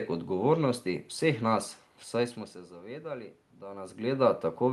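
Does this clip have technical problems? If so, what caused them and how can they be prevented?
No, the signal has no technical faults: the background is the room's own noise, the level changes around 2 s and 3.5 s come from the talker moving relative to the microphone, and the top end stopping near 12 kHz, with coding texture, is what a call codec such as Opus at around 32 kbps normally sounds like.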